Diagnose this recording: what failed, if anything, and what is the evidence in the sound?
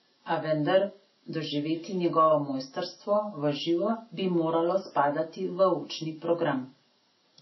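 The codec stage failed: the speech was likely passed through MP3 compression at a very low bitrate, which fits roughly 24 kbps. Throughout, nothing survives above 5.8 kHz, and weak frequency lines flicker between frames, so s sounds turn swirly and watery and attacks smear.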